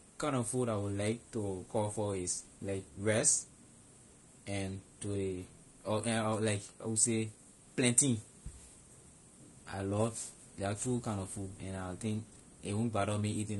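From start to finish the speech carries plainly audible coding damage: a rough, grainy texture with noise filling the gaps between the harmonics and a thin, synthetic-sounding top band. The likely cause is low-delay AAC compression of the AAC-ELD kind. Its short frames resolve pitch harmonics poorly, so bits are spent inefficiently and the encoder fills detail with noise, and the overall degree of damage fits a bitrate of around 32 kbps.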